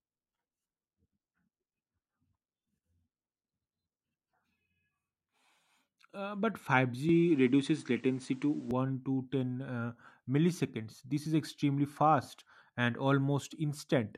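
From 7.09 s to 8.71 s the speech loses everything above 9.8 kHz, its level shifts by around 5 dB, and a new noise floor appears roughly 40 dB down, with no gap at the change. This is likely an input switched to a poorer device.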